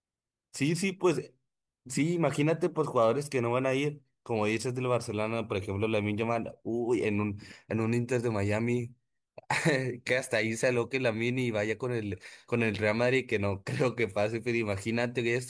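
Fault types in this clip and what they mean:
No faults can be heard anywhere in this speech.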